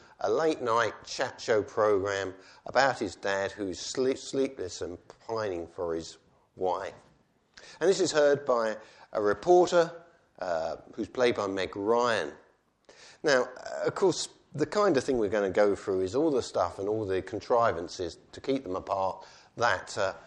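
No technical faults can be heard anywhere in this audio.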